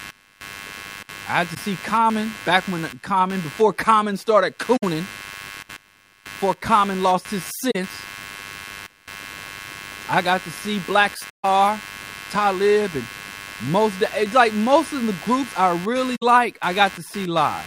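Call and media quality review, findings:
Computer activity noise, throughout: buzzing or chirping interference pulsing at roughly 100 Hz, sitting roughly 20 dB under the speech. Probable component: shared analogue ground on the capture machine. Processor, graphics or mouse load currents modulate the ground reference, so the audio path picks up the computer's activity instead of following the speech.

AAC frame loss with muting: short soft-edged dropouts where the speech fades out and back in. They occur at 1.54–1.57 s after "I had" (21 ms, a single brief dip), 4.76–4.83 s (64 ms), 7.71–7.76 s after "lost his" (43 ms), 11.29–11.45 s (149 ms, the longest hole) and 16.15–16.23 s after "the groups I really" (64 ms). Probable component: the AAC decoder. Lost frames were zeroed, and the overlapping windows taper each gap. The durations fit runs of one to seven frames of about 21 ms each.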